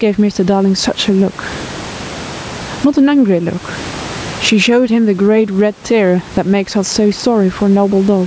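Speech passed through call microphone processing, where the input gain was most likely set far too high, so a fast limiter clamps down on every loud syllable and releases in the pauses, a swing of around 20 dB that runs through the whole clip. The result is gain pumping: the level contrast is squashed flat, while the room noise sits about 31 dB under the speech and nothing reaches above 8 kHz.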